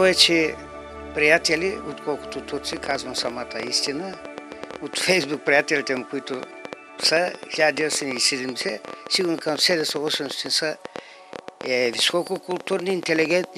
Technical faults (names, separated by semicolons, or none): train of clicks